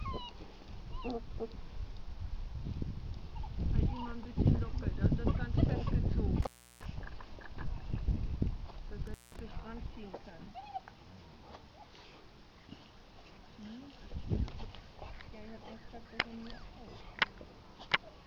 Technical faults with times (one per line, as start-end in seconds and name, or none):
6.42-6.85 intermittent contact
9.07-9.39 intermittent contact